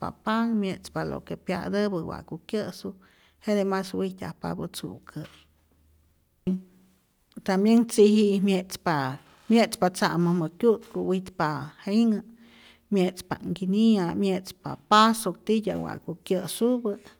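Nothing in the speech stood out as a technical fault on listening.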